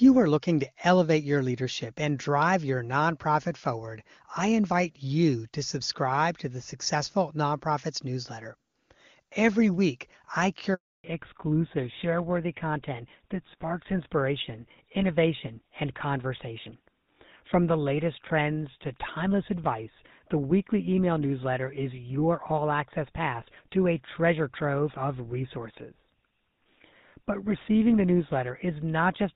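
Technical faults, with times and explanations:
10.74–11.04 s, handover gap: the speech cuts out for 300 ms while the call switches networks and no frames arrive. That stretch is lost.
11.04 s to end, fallback to narrowband: after clean HD Voice, everything above 4 kHz disappears, leaving duller, rougher speech, which fits a switch to GSM full rate.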